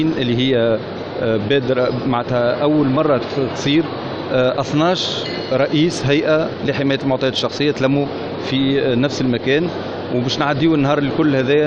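A Bluetooth SBC bit pool drop runs from 5.35 to 7.51 s. Over that stretch the wireless link was congested, and the sender cut the encoder's bit budget sharply so the stream would keep going. With so few bits, the highest sub-bands are starved or dropped entirely and the lower ones are quantised coarsely. The top end goes dull and a gritty, grainy noise sits under the sound. The thinning fits a fall from a bit pool of about 28 to 10, near 84 kbps, before the rate recovers.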